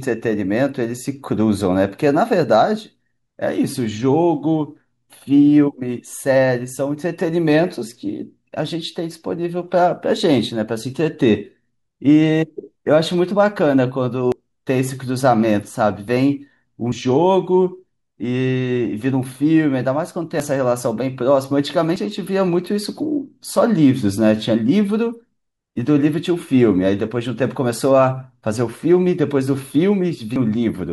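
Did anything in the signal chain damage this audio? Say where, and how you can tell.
Yes. Dropped buffer (overrun) at 14.32, 16.92, 20.40, 21.96 and 30.36 s: the speech skips ahead by up to a tenth of a second, most likely because the capture driver overwrote samples before they were read.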